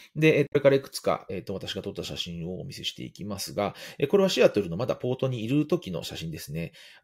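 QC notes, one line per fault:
0.45–0.56 s, damaged data in a compressed stream: a short disturbance, about 0.11 s long, breaks in where the compressed data has been corrupted. The decoder misreads the bad frames, loses sync and hunts for the next valid frame header before clean decoding resumes. On a spectrogram it shows as an abrupt break with hard vertical edges. The waveform shows a discontinuity.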